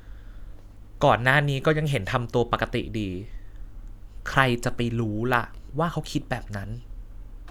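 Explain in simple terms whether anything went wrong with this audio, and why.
Nothing went wrong; no faults can be heard here.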